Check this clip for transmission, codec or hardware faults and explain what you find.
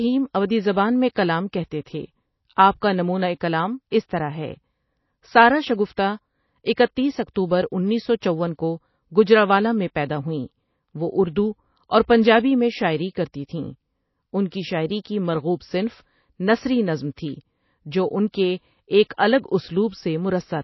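Two codec faults are present: coding damage across the whole clip, and three short pre-echoes.

MP3 compression, likely at a low bitrate near 24 kbps given how starved it sounds, throughout: the encoder runs short of bits, discards everything above 5.8 kHz, and drops weak frequency lines that flicker between frames. The speech sounds dull, watery and swirly, with metallic chirps on sibilants.

Pre-echo at 1.15 s, 5.96 s and 19.17 s: an abrupt onset sits late in a transform block, so the block's quantisation noise spreads backward into the quiet before it. A short hiss precedes each attack, lasting 12 ms, 19 ms and 12 ms, and the onset sounds softened.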